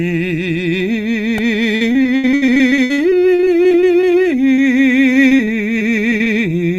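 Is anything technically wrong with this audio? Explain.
Yes, this music clip has several playback and network faults.

A repeated buffer at 1.38 s occurs when late audio makes the device replay one tiny block three extra times, which fits a 64-sample buffer. It is heard as a brief buzz.

Repeated packet loss (robotic sound) runs from 1.75 to 4.05 s, with gaps up to 77 ms, and again from 5.14 to 6.28 s. Continual patching of missing pieces makes the music choppy, with pieces missing.

A jitter buffer slow-down runs from 2.29 to 4.36 s. To rebuild its reserve, the receiver stretches the audio by 183 ms, playing it at 91% speed without changing pitch.

Short concealed packet loss from 4.56 to 4.60 s leaves a 20 ms hole filled by continuing the previous sound, heard as a brief smear.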